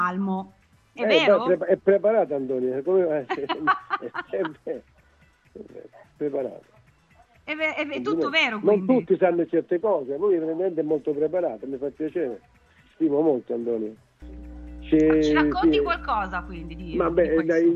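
Mains hum enters at 14.22 s and runs to 17.38 s, near the end of the clip. It is a steady low tone at 60 Hz, the frequency of the power line, which points to a ground loop or a nearby transformer coupling the supply into the signal path. It sits only roughly 15 dB below the wanted sound, so it is heard as a constant drone underneath the audio.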